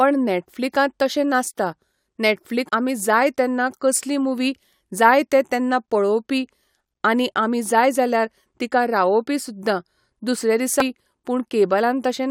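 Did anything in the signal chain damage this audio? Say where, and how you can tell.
Yes. There are three short glitches at 2.68 s, just before "आमी जाय तेन्ना कसली"; at 6.88 s, between "जाय ते तेन्ना पळोवपी" and "आनी आमी जाय जाल्यार"; and at 10.80 s, right after "तिका रावोवपी सुद्दां दुसरे". These point to damaged data in a compressed stream at the codec or storage stage. Corrupted bytes made the decoder misread those frames and lose sync until it found the next valid frame header, which produced each brief blip.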